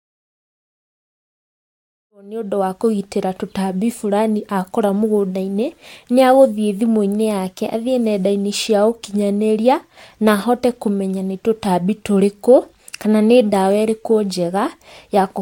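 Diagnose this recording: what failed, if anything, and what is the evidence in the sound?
Nothing failed in this recording; the only level change is a smooth fade-in at the start that is complete by about 2.83 s.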